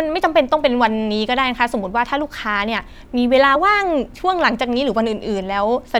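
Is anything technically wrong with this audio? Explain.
Yes. At about 3.52 to 3.56 s the speech briefly lurches forward with a blip at the join. It is as if a sliver of sound went missing. This is compressed frames skipped: encoded frames were never played, either because they were absent from the stream or because the decoder rejected them as damaged. Around 30 ms of audio drops out, and the audio on either side is joined directly.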